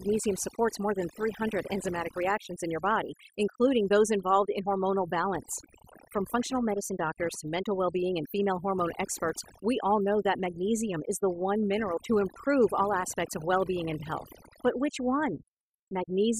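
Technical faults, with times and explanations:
Throughout, computer activity noise: processor or graphics load shifts the shared ground under the audio circuit, adding a buzzing chirp pulsing around 500 Hz, roughly 15 dB below the speech.
Throughout, overdone noise removal: an over-strong noise reduction pass cuts bands it mistakes for noise, taking quiet parts of the voice with them and leaving near-silent gaps with twinkling specks.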